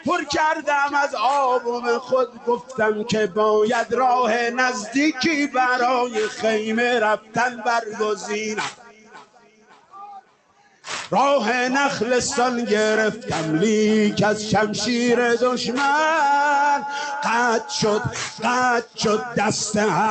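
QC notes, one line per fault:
Throughout: noise suppressor applied to music or sounds. A suppressor tuned for speech stays active and treats sustained tones, ambience and decay tails as noise. Its gain swings by roughly 10 dB as it clamps down and releases, so onsets pass while held sound sinks, giving a pumping, thinned character. On the waveform the envelope breathes, dipping after each attack. The spectrogram shows truncated, patchy tails, with content topping out near 8 kHz from the call path.
2.0–2.79 s, 7.17–7.66 s, 8.72–9.95 s, 10.21–10.86 s: sound cut by the noise suppressor. In these stretches the suppressor classifies steady or fading sound as noise and pulls it down by about 11 to 12 dB at the deepest point. Held sound sags and decays stop early, while sharp transients mostly survive. The waveform shows notched, shrunken envelope segments. The spectrogram shows dark gaps where sustained bands fade out abruptly, with the longest gap spanning 8.72–9.95 s.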